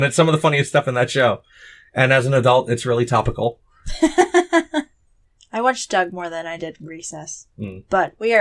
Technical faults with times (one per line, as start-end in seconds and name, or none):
0.00-8.41 resampler restarted on every block